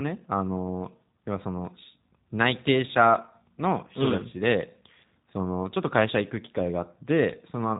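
Speech carrying G.729 codec damage for its whole length, plainly audible. Nothing passes above about 3.8 kHz, and the voice is rebuilt from a vocal tract filter and pitch predictor with sparse pulses, leaving a rough, slightly synthetic timbre consistent with 8 kbit/s.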